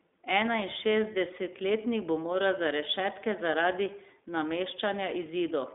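Throughout the speech, the iLBC codec is plainly audible. Nothing passes above 3.8 kHz, within a 200 Hz to 3.6 kHz line band. Unlike a plain band limit, each frame's independently coded excitation, consistent with 20 ms frames and a 15.2 kbps mode, adds a rough, synthetic grain.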